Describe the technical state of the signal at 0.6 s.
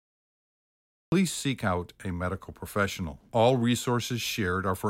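At 0.6 s the clip is in a cut-off start: silence runs from 0.0 to 1.12 s, where the speech begins abruptly mid-sound on "seek out a medical". The recording began late, so there is no natural attack or fade-in, only an immediate entry.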